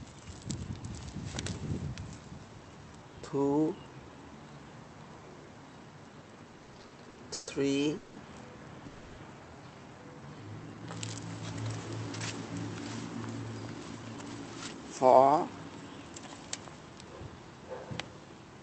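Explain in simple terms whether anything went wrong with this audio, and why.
A few things did go wrong, and they all come from the live call connection struggling to keep audio arriving on time.

From 6.51 to 7.49 s there are repeated stalls (stutter). The audio hiccups about ten times, the longest around 130 ms. Each time, the incoming audio ran dry for a moment and the receiver stretched out the last bit of sound to cover the gap. Nothing is actually lost, but about a third of that second is filler, so it drags and stutters.

Right after that come two call audio freezes: one from 7.97 to 8.18 s (about 190 ms) and a longer one from 8.86 to 9.20 s (about 320 ms). In both, the sound hangs on itself as a buzzy, fading smear instead of going quiet, then picks up exactly where it left off. The likely cause is packets getting held up on the network, so the receiver had to improvise until they showed up.

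From 10.09 to 10.87 s there's a jitter buffer slow-down. The audio plays at roughly 85% speed without any change in pitch. The receiver was low on stored audio, so it quietly repeated tiny slices to build a cushion, adding about 123 ms. Sounds come out a bit drawn out.

Then from 12.57 to 15.65 s there's the opposite, a jitter buffer speed-up. The audio runs about 13% fast, still at normal pitch. The receiver had more audio stockpiled than it wanted, so it trimmed out little pieces, about 0.4 s in total, to catch up. It comes across as hurried.

Underneath all this is the normal call codec, which keeps the sound below about 8 kHz.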